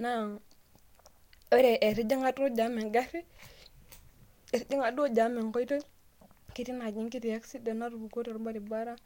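No technical faults are audible.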